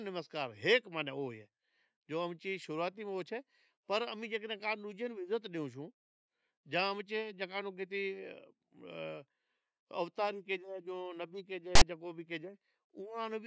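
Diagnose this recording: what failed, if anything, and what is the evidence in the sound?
File tags played as audio at 11.75 to 11.82 s: a storage or file-parsing failure. A block of text tags was decoded as sample data, so the speech is interrupted by a hard-edged, loud rasp, offset to one side, lasting about 60 ms.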